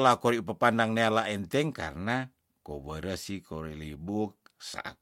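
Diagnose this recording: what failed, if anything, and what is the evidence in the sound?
Nothing failed in this recording, and no stage from capture to playback leaves a mark on the speech. The sound gives no evidence that points to a fault anywhere in the chain.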